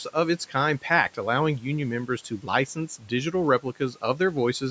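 Speech cut by the noise suppressor at 2.29–2.49 s, 2.99–3.12 s and 3.6–4.35 s: mistaken for noise, speech drops by about 11–12 dB, sounding swallowed.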